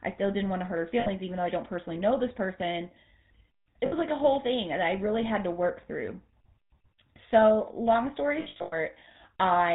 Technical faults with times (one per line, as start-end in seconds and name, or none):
0.00-9.74 GSM full-rate codec
1.00-1.08 lost GSM frames
3.86-3.94 lost GSM frames
8.40-8.74 lost GSM frames